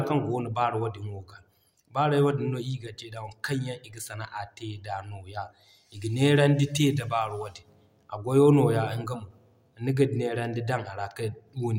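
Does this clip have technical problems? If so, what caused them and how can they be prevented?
No, the speech shows no technical faults, so there is nothing to trace or prevent.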